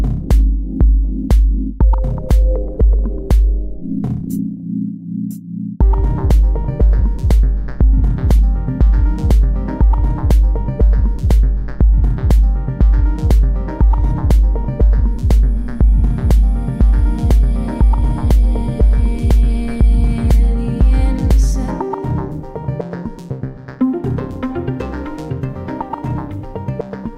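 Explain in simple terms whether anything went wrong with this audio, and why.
Something did go wrong, and it lasts the whole clip: sample clock jitter. The clock that times each sample wobbles by around a microsecond and a half, so samples land slightly early or late. Where the sound changes fastest, in loud and bright moments, that timing error becomes a faint hiss or roughness riding on the sound. Unlike ordinary background hiss, it disappears completely whenever the sound goes quiet.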